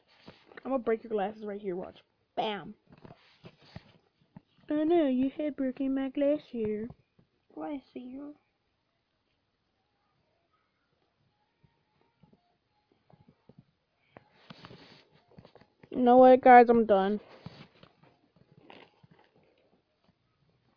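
No technical faults can be heard anywhere here.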